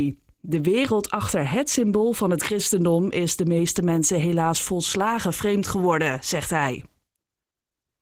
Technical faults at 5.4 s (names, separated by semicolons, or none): Opus voice compression